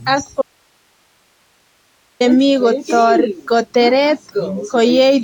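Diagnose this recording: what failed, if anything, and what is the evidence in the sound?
Codec stage: the smeared, swirly, hollow texture with blurred attacks and nothing above 19.4 kHz points to generation loss, likely from roughly seven Vorbis re-encodes near 70 kbit/s.

Signal path: audio dropout to a faint residue from 0.42 to 2.20 s. The signal abruptly vanishes for about 1.79 s, leaving hiss about 45 dB down, likely because the source dropped while downstream stayed live.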